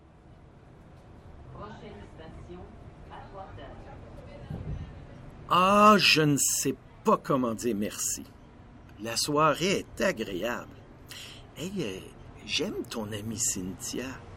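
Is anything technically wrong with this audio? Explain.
No, nothing technically wrong can be heard in this audio. There is no point in it where a fault stands out.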